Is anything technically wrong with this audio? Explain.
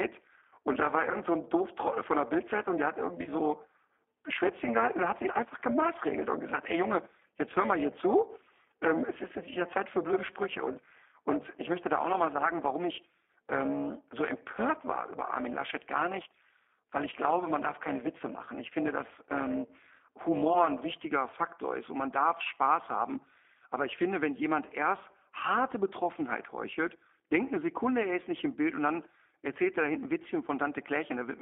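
Yes. The whole clip carries G.729 codec damage, plainly audible. The speech is confined to roughly 250 Hz to 3.5 kHz, and it sounds slightly rough and synthetic. That fits an 8 kbit/s G.729A stream. This codec does not send the waveform. It rebuilds each 10 ms frame from a vocal tract filter, a pitch predictor and a handful of pulses, so fine detail is lost and anything above the telephone band is missing.

From the start to about 20.94 s there is overlap-add ripple. The level swings by about 11 dB at a rate of roughly 300 Hz, which gives a metallic buzz with extra tones around each note over the speech. It comes from the audio being split into windowed frames and joined again with overlaps that do not add up to a constant gain, so the loudness pulses once per frame. The ripple stops at about 20.94 s.

There are also two short dropouts of VoIP packet loss concealed by the speech codec. 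The first runs from 1.12 to 1.16 s, about 20 ms lost. The second runs from 3.24 to 3.29 s, about 30 ms lost. In each gap the decoder keeps going on its last pitch and filter settings and lowers the gain frame by frame. The speech smears into a buzzy tone or coloured noise that fades instead of cutting to silence. Each frame builds on the one before, so the sound stays weak or distorted for a moment after the packets return.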